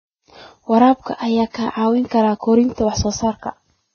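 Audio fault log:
Throughout: Vorbis compression. Nothing remains above 6.5 kHz, and the treble below that is hissy and grainy, with rough tones and smeared onsets, likely from heavy Vorbis coding, fitting a rate near 16 kbps. Unlike a clean low-pass, detail becomes noise.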